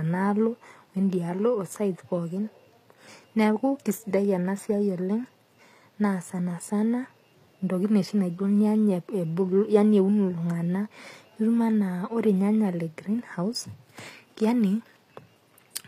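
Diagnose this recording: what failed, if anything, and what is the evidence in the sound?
The codec stage failed: the speech was likely passed through HE-AAC compression at a low bitrate, consistent with about 24 kbps. Its treble is rebuilt from copied lower bands, so s sounds come out gritty and lispy throughout, and nothing survives above 14.9 kHz.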